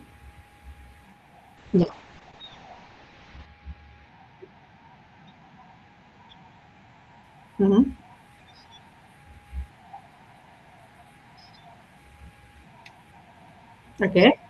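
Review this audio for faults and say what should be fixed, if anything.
From 1.59 s to the end, the speech goes rough and muffled: a call bitrate drop. The encoder was starved of bits, which fits a fall from about 32 to 7 kbps, so it codes coarsely and cuts the top end at 8 kHz, bottoming out for about 1.9 s. To prevent this, give the call a higher minimum bitrate floor and let bandwidth estimation recover faster.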